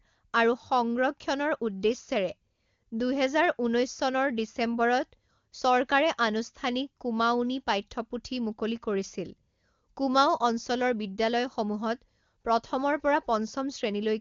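Nothing stood out on listening to this speech clip, which comes through the AMR wideband (HD Voice) codec at 23.85 kbit/s with its content reaching up to about 7.1 kHz.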